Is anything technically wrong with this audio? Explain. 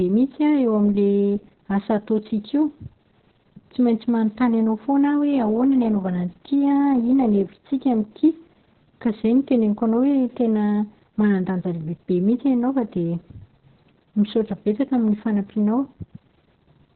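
Yes. Throughout the whole clip the speech carries Opus voice compression. The SILK coder has cut the band to narrowband, so nothing is left above 4.3 kHz, and its excitation is coarse. That suggests a very low bitrate, around 6 kbps. The voice sounds muffled, hoarse and faintly robotic. On a spectrogram, the energy stops at a flat ceiling near 4.3 kHz, with smeared, blocky harmonics below it.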